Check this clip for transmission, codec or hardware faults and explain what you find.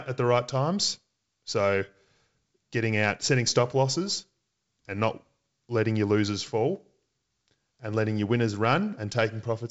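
No transmission, codec or hardware faults can be heard in this speech. It comes through G.722 wideband telephone coding at 64 kbit/s, so nothing reaches above 7.7 kHz, and any trace of the coding itself is faint at most.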